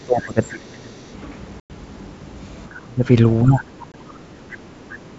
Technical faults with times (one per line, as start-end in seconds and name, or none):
0.00-1.06 speech suppressed in double talk
0.43-0.51 other side's voice leaking through
1.60-1.70 packet loss on an ADPCM call
2.69-3.04 speech suppressed in double talk
3.43-3.65 speech suppressed in double talk
3.92-3.95 packet loss on an ADPCM call
4.08-4.12 other side's voice leaking through
4.52-4.56 other side's voice leaking through